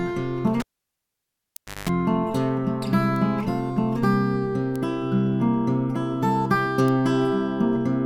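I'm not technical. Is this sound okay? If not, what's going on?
No. At 0.6 s a cable pulled and plugged in gives a pop, about 1.2 seconds of near silence, a short 50 Hz mains buzz, then another pop at 1.9 s. Bit error spikes are single sharp ticks at 1.56, 3.16, 4.76 and 6.88 s, caused by a flipped digital value. Unlike the cable fault, each is a lone click with no gap or hum.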